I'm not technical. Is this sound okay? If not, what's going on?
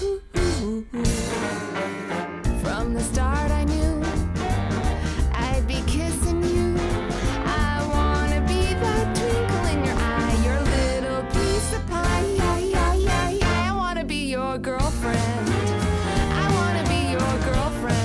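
Yes, it sounds fine; nothing here needs fixing.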